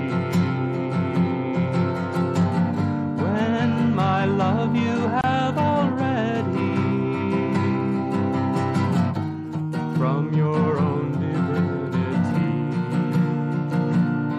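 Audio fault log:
5.21 to 5.24 s, gap at a join of encoded pieces: the sound drops out for about 27 ms, with smeared edges, then resumes where it stopped. Two separately encoded pieces were joined untrimmed, leaving the encoder's start delay and last-frame padding in place.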